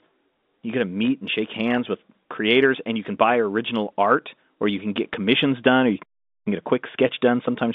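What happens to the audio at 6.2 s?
At 6.2 s the speech is caught in a playback stall. Right after "commissions done or you", the output falls silent from 6.03 to 6.47 s, about 0.43 s. The player likely ran short of data or was blocked, so nothing reached the output until it recovered.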